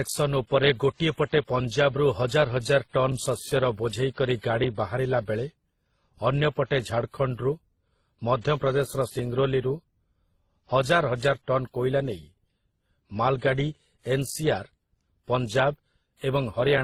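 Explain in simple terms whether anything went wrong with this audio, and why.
The speech has a mix of compression artefacts from start to finish. This is likely transcoding between lossy codecs. The audio was squeezed by one compression method and then another, and both sets of damage remain.

From 1.6 s, just after "ଗୋଟିଏ ପଟେ", a click repeats every 1.52 s, about ten times, until 16.78 s. These are clock drift buffer slips, likely from two devices whose clocks run slightly apart.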